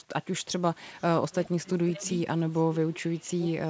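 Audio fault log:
0.98–1.03 s, 1.46–1.50 s and 2.55–2.61 s: echo leak. Three short, faint scraps of the speech come back about 408 ms late, sitting roughly 25 to 30 dB under the main voice, so you catch them as a ghostly tail rather than a clear repeat. The likely cause is a far end on speakerphone whose echo canceller missed a bit of what its mic picked up and sent it back down the line.
1.63–2.05 s and 2.69–3.51 s: speech suppressed in double talk. The talker's level sags here while the other side is talking, by about 15 dB in the first stretch (around 300 ms affected) and about 25 dB in the second (around 700 ms affected), so words thin out and partly drop away. Likely the echo canceller couldn't tell the local talker from loudspeaker echo and ducked both, with the G.722 path's top end stopping at 8 kHz throughout.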